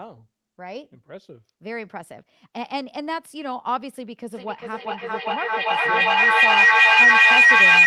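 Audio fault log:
4.33–7.87 s, feedback echo between two devices: sound returns roughly every 0.4 s. A second device replays it into the microphone. Repeats build to about 16 dB above speech.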